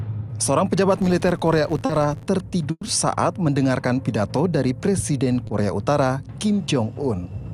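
From 0.98 to 2.31 s the filter is restarted on every block: each block begins from a zeroed state, so a small transient opens every one. This produces a buzz at about 86 Hz, which fits a 512-sample block, rising and falling with the level of the sound. On a spectrogram it shows as a comb of harmonics spaced 86 Hz apart, and in the waveform as evenly spaced tiny spikes.

Inside that stretch, at 1.85 to 1.91 s, comes a short concealed packet loss. About 40 ms never arrived and was replaced by a continuation of the preceding sound, then blended back into the real audio. It is heard as a brief smear or wobble. On a spectrogram the fill looks like a smoothed copy of the frame before it, with fine detail flattened.

At 2.71 to 2.83 s a burst of packet loss removes about 100 ms. The receiver extended the last sound and faded it out, ending in about 40 ms of silence before the audio resumes further on. 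It sounds like a held, decaying buzz or hiss followed by a jump. The waveform shows a shrinking repetitive envelope and then a flat gap.

A second short concealed packet loss at 5.47 to 5.51 s covers only about 20 ms and is heard as a brief smear or wobble. It leaves a narrow band of smoothed spectrum.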